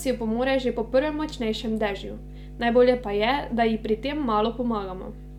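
Mains hum runs through the whole of this speech clip as a steady low tone at 50 Hz, sitting roughly 15 dB below the speech. Power-line current is leaking into the signal, most likely through a ground loop or a nearby transformer coupling into the audio path.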